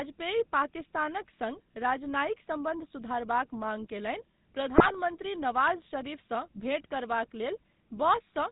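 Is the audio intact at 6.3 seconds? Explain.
No. At 6.3 s the speech is plainly buzzy and gravelly, with nothing above 4 kHz, as it is across the whole clip. This is GSM full-rate codec damage, consistent with about 13 kbps: a vocal-tract model driven by regular pulses, keeping only every third excitation sample.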